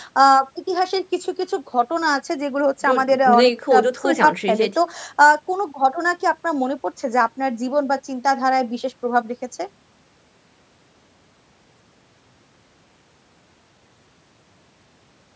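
No technical faults can be heard anywhere in this speech recording. It has passed through a call's microphone processing, which trims the lowest bass and leaves nothing above 8 kHz.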